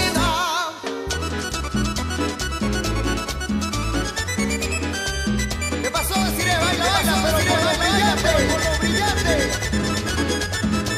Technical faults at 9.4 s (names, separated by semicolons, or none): doubled audio track